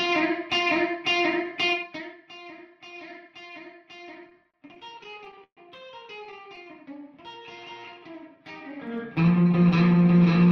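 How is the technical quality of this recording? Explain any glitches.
The recording has three kinds of fault: stepped level ramps, bursts of stutter, and a short stretch of slowed playback.

Zipper noise appears from 1.70 to 2.18 s, a fall of about 20 dB, and from 8.61 to 9.01 s, a similar rise. The gain moves in unsmoothed 1 dB jumps, some 40 to 50 a second, and each jump clicks, producing a buzzy ticking. On a waveform the envelope looks like a staircase, and a spectrogram shows faint evenly spaced vertical lines.

Repeated stalls (stutter) occur from 4.23 to 5.59 s, with gaps up to 128 ms covering about 22% of that span, and again from 6.25 to 6.68 s with brief gaps near 11 ms. Late packets drained the jitter buffer, and the receiver stretched the last sound to cover each wait, so the audio drags and catches. A spectrogram shows smeared, repeated frames, and the waveform shows flat or fading patches in the longer waits.

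A jitter buffer slow-down runs from 6.74 to 8.42 s. Repeated pitch periods add 140 ms, so playback runs at 92% speed with unchanged pitch and sounds drawn out. In a spectrogram the events are horizontally stretched while harmonic spacing stays constant.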